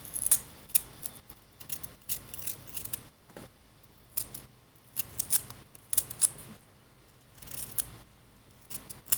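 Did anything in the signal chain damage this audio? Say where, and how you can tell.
Yes: short concealed packet loss at 6.57 to 6.61 s, at the network stage. About 20 ms of audio arrived too late to decode, and the receiver filled the gap by extending the preceding sound before blending back, leaving a brief smear or wobble in the sound.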